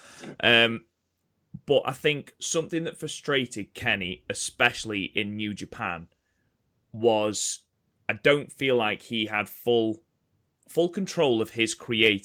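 No technical faults can be heard anywhere in this recording.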